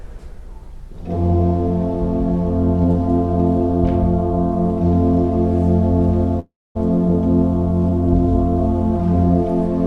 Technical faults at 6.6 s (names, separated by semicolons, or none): call audio freeze